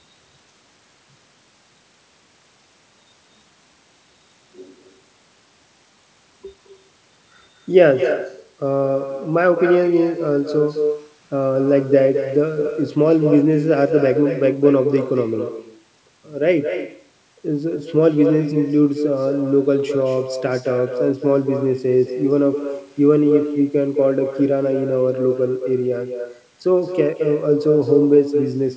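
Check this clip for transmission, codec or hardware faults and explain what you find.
The clip has one fault, present throughout: echo with no canceller. Every phrase of speech is shadowed about a fifth of a second later by a thinner copy only about 7 dB quieter. The far end's loudspeaker is feeding its microphone, and nothing removes that return before it travels back. The audio stops at 8 kHz, which fits a wideband call codec such as G.722 and is expected on this kind of call path.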